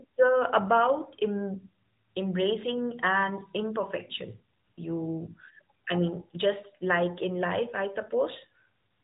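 The speech runs through an AMR narrowband mobile codec from start to end. Nothing above about 3.8 kHz survives, so the sound is thin and muffled. Each short frame is rebuilt from a vocal-tract model and a few pulses. The plainly audible buzzy, synthetic edge fits a mid-range rate near 10.2 kbps.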